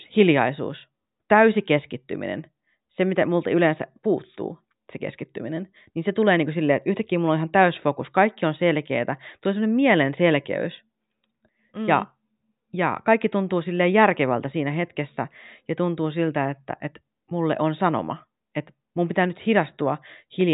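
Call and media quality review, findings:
No faults found in the speech recording. Nothing audible points to any component needing follow-up.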